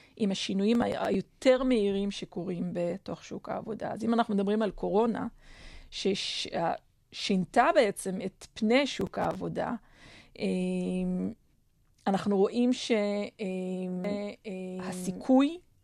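From 0.75 to 1.25 s, and again from 9.01 to 9.35 s, a burst of gritty crackle tears across the speech and stops once each stretch ends. This is processor overload crackle. The processor repeatedly failed to finish its small audio buffers on time, and each missed deadline was filled with a hard-edged fragment of old audio. The texture points to buffers of around 5 ms, with roughly seven misses in the first burst and about ten in the second.

At 14.04 s a second copy of the speech appears abruptly and runs to the end of the clip. It trails the original by about a second and sits about 5 dB lower. This doubled audio track has the full bandwidth of the original, with no reverberant decay or room colour, so it sounds like a pasted duplicate rather than an echo. The likely cause is either a second capture through a slower path or an edit that left two copies out of step.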